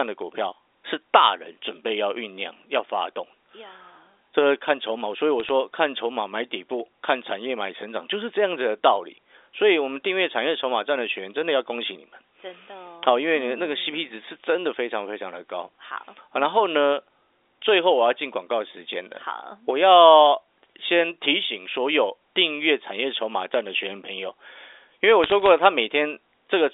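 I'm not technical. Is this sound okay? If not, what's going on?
No. There are two kinds of problem in this telephone-quality speech clip.

Around 5.40 to 5.49 seconds, and again from 25.24 to 25.49 seconds, you can hear short bursts of clicks or crackle sitting on top of the speech. These are bit errors on a digital phone line. The call travels as a stream of numbers, and a few of those were corrupted on the way. Each corrupted number turns one tiny slice of the sound into the wrong value, and when that jump is large it is heard as a tick.

From 16.53 to 19.98 seconds a steady low hum runs underneath the speech. This is mains hum at 50 Hz, the frequency of the electricity supply. It usually gets in through a ground loop or a nearby transformer, which lets the power line leak into the audio as a constant deep tone. The narrow, phone-like sound of the clip comes from the telephone line itself, which is working as intended.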